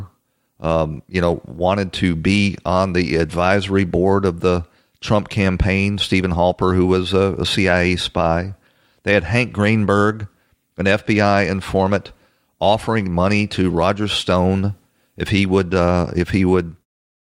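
No technical faults can be heard in this speech recording, and the level eases out smoothly over its final moments as an editor's fade-out would, with no click or hard edge at the close.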